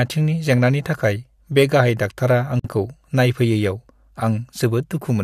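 At about 2.60 s the speech just drops out for roughly 49 ms, a gap at a join of encoded pieces. Separately encoded chunks, apparently every 6 s, were butted together with their encoder delay and end padding left in. The silence has smeared edges, then the sound picks up where it stopped.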